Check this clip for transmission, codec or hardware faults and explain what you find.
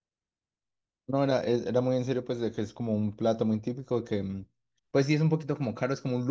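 I found no faults to explain in the clip.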